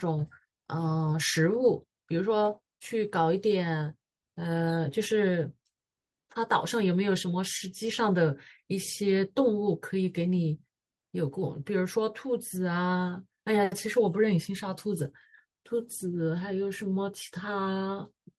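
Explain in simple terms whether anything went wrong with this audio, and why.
Listening to the speech here, nothing stood out as having gone wrong, so there is no problem to point to or explain.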